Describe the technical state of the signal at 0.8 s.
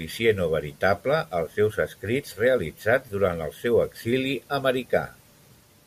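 At 0.8 s the speech signal is intact, with no audible technical fault at that moment.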